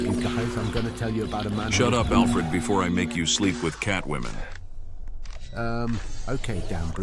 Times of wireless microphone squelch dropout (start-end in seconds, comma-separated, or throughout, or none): none